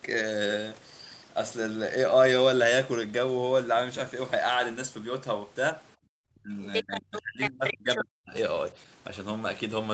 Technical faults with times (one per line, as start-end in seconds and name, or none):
6.18-8.35 speech suppressed in double talk
6.74-6.83 other side's voice leaking through
7.16-7.99 other side's voice leaking through